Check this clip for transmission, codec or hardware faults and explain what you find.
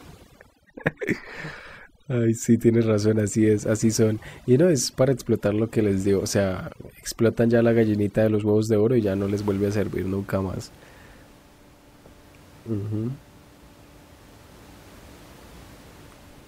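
One fault is audible. From 0.0 to 9.02 s the background drops and turns twinkling: overdone noise removal, switching off bands near its noise estimate along with quiet speech detail. After that, room noise sits about 26 dB below the speech.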